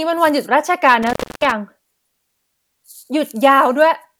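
Between 1.03 and 1.52 s the speech is hit by an intermittent contact: a loose plug or cable briefly opens, silencing the signal for about 0.29 s. Unlike a clean digital dropout, the gap is bracketed by scratchy crackle and leaves faint hiss while the connection is open.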